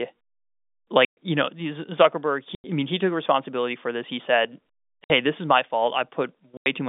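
At 1.05, 2.55, 5.04 and 6.57 s the speech drops into dead silence. The holes last 120, 90, 60 and 90 ms. This is packet loss filled with silence. Lost packets were replaced by nothing, and the gap lengths fit 30 ms packets. Each hole has hard edges.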